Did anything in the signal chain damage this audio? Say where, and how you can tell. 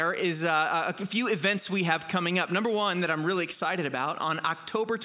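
No, nothing in the chain has left an audible mark on this audio. Every stage from capture to playback seems to have passed the signal along without damage that a listener could pick out.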